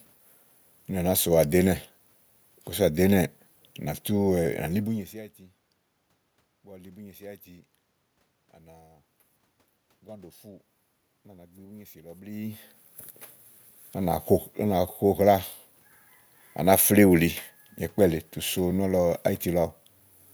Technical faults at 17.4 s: none

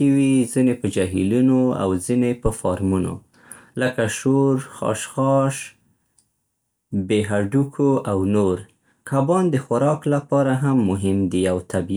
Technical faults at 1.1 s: none

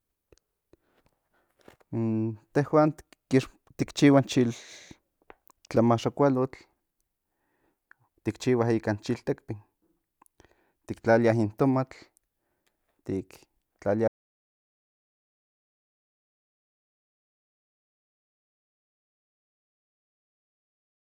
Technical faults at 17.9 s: audio dropout to silence

